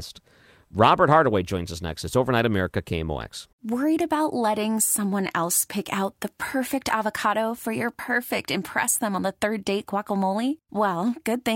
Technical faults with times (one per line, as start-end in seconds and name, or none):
0.00-5.79 periodic clock jitter